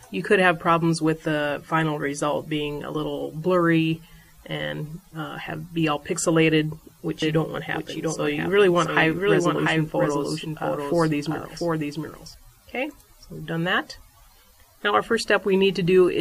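Doubled audio track, 7.22 to 12.34 s: a second full-band copy trails about 0.7 s behind, roughly 5 dB quieter and dry, likely from a slower duplicate capture path.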